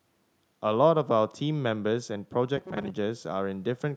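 From 2.57 to 2.91 s the speech picks up robotic sound from repeated short buffers: it goes rigid and metallic, a buzz locked at 188 Hz that still loosely tracks the speech underneath. That's likely the playback side running short on fresh audio and looping a slice of roughly 5.3 ms (one over 188 Hz) to fill the gaps, so about half of that stretch is repeats rather than real signal.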